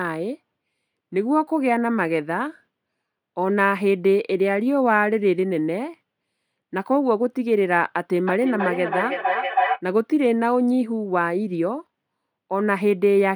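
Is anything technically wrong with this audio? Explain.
Yes. From 8.25 to 9.83 s a steady tone around 700 Hz swells up beneath the speech, with repeats roughly every third of a second, until it is nearly as loud as the talker, peaking within about 1 dB of the speech level, and then stops. This is feedback howl: a microphone is picking up a nearby loudspeaker carrying the same call, and each trip around that loop adds level, so the repeats narrow onto the frequency the loop favours.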